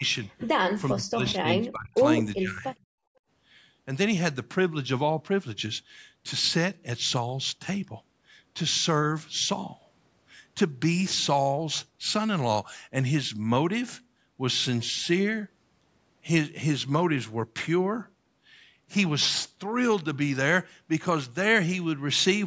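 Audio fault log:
0.00–0.04 s, 0.94–2.05 s and 2.38–2.64 s, speech suppressed in double talk: the speech dips briefly and lightly at the very start, falls by roughly 35 dB for about a second in the middle span, and sags by around 15 dB in the last. The likely cause is an echo canceller that could not separate the near talker from loudspeaker echo while both sides spoke, so it turned everything down. What sets this apart from gating is that the speech itself is what drops.
2.92–3.28 s, background gated by the echo canceller: the room sound drops by about 33 dB for roughly a third of a second, then comes back when the canceller lets go. The background vanishes, ducked hard while the loudspeaker was playing. The missing content above 8 kHz comes from the call's microphone path and is separate from this fault.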